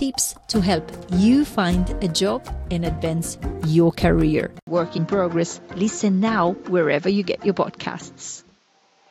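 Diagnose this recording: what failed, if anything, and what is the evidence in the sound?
At 4.59 s an 80 ms gap, then a spectrogram ceiling near 7.6 kHz, about 5 dB less level and a new noise floor: likely the input switched to a poorer device.

At 4.96 s a jump ahead in the audio marks compressed frames skipped by the codec: roughly two frames, about 50 ms, missing.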